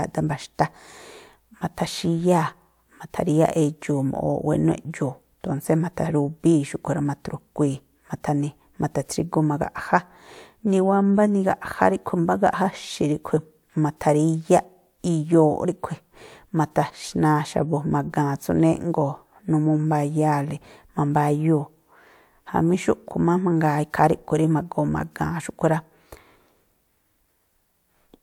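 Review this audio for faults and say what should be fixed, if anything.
Nothing to fix: no technical faults are audible anywhere in the speech recording.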